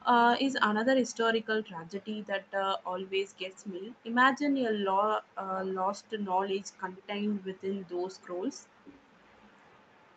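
A speech recording passed through a call path band-limited to 8 kHz. From 9.19 s to the end, a very faint delayed copy of the speech trails the original by 337 ms, roughly 35 dB below it. This is an echo leak, likely from a loudspeaker whose echo canceller let residual microphone pickup return into the call.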